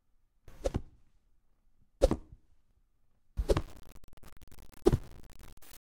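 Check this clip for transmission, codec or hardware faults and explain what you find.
One fault shows up, in the final stretch of the clip. From 3.61 s to the end at 5.83 s, the sound turns grainy and gritty, with a rough distortion that rises and falls with the audio and sits only about 20 dB below it. Quiet moments sputter or drop out instead of fading smoothly. The likely cause is low bit depth without dither: the signal was cut down to roughly 7 bits by truncation. With so few steps and no dither to randomise the rounding, the error follows the waveform and is heard as signal-dependent grit.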